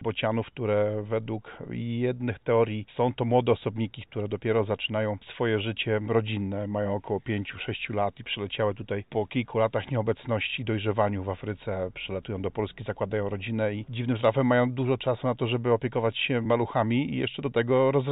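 Nothing here stands out as a technical problem; the sound comes across steady and intact the whole way, with no faults to point to.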